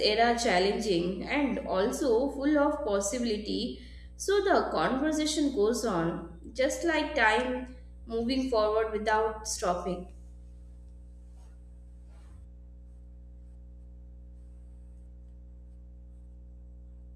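From the first moment to the end, mains hum runs under the speech as a steady low tone at 60 Hz with a few low harmonics above it, sitting around 20 dB below the talker. Power-line current has leaked into the signal path through a ground loop or a nearby transformer. Unlike handling noise or wind rumble, it holds one fixed pitch and level throughout, and it continues unchanged through the pauses between phrases.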